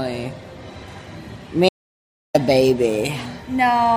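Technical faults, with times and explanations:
1.69 to 2.34 s, audio dropout to silence. The sound cuts off mid-flow and returns abruptly after about 0.66 s. The gap is dead digital silence, with no room tone or background noise beneath it. Whatever was happening in those two thirds of a second is simply missing. The likely cause is a brief loss of input, such as a disconnected device, a failed link or an accidental mute, while recording carried on writing silence.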